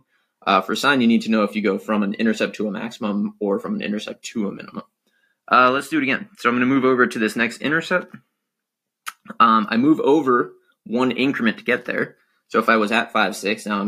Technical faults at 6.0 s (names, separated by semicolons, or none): none